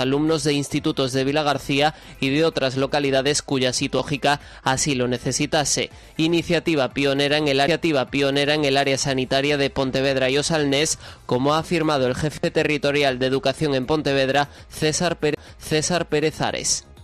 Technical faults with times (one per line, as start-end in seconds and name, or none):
3.99 CD skip
7.67 CD skip
15.34-15.37 CD skip